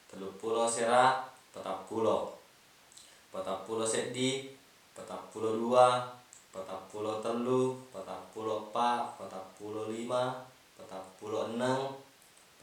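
No technical faults are audible.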